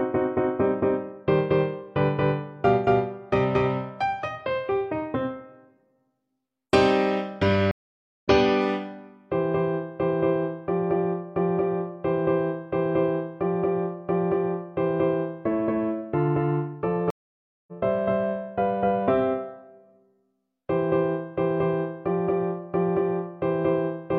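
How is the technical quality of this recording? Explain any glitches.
The recording is interrupted twice by a stream reconnect. At 7.71 to 8.28 s the audio drops to silence for about 0.52 s, then picks up roughly a third of a second further along than where it stopped, so a short stretch of material is simply missing. The same happens at 17.10 to 17.72 s, with about 0.57 s of silence and a similar forward jump. In each case the connection broke, the player waited, reconnected and started a new decoder partway into the live stream, so playback resumed from wherever the stream had reached.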